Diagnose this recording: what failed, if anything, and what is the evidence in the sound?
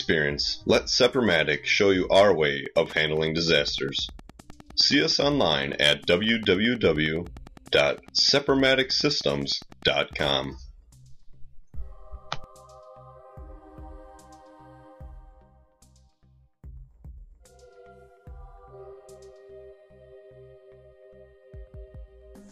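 Wi-Fi interference got into the analogue wiring here. From 2.62 s to 10.46 s there's a steady tick running at roughly ten per second, which matches a 102.4 ms beacon period, sitting somewhere around 25 dB under the programme. What's happening is that a Wi-Fi radio close to the audio circuit is sending its periodic beacon, and the circuit is rectifying that RF, so each beacon turns into an audible click.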